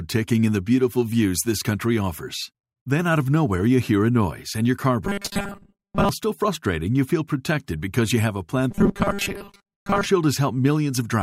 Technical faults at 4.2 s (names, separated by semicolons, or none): none